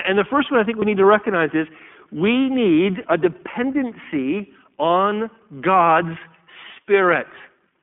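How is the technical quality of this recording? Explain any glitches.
The recording is noticeably degraded: it's been through a narrowband voice codec for the whole clip, and there's one short dropout near the start.

The iLBC codec is audible throughout. Everything sits in a telephone band of roughly 200 Hz to 3.4 kHz, so there's no air or sibilance on top. The codec rebuilds each short frame's excitation on its own, and at a rate that fits its 15.2 kbps mode this leaves the speech clearly rough and a bit synthetic.

The lost iLBC frames come at about 0.80 to 0.84 s, between "first one I think" and "need to recognize is". The gap lasts roughly the length of a single 20 ms frame. The decoder covers it by replaying the last pitch period with some noise mixed in, so you hear a brief, slightly buzzy held sound instead of silence. Since iLBC frames don't depend on each other, the speech snaps back cleanly right after.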